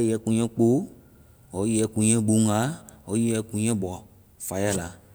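No technical faults can be heard in this recording.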